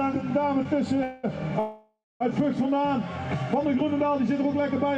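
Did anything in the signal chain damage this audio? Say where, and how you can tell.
Yes. Short stall from a late packet, 0.63 to 0.74 s, network stage: the jitter buffer briefly emptied, so the receiver held the last sound about 15 ms before resuming.

Call audio freeze at 1.03 to 1.25 s and 1.59 to 2.22 s: sound is stretched into a fading buzz, the second reaching silence, likely from delayed packets draining the jitter buffer.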